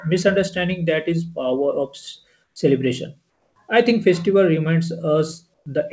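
Comfort noise in place of the background at 2.44–2.56 s, 3.30–3.56 s and 5.54–5.66 s: the quiet background sound turns into steady, featureless hiss, about 2 dB quieter, about 5 dB quieter, then about 2 dB louder, likely because the sender paused transmission during silence.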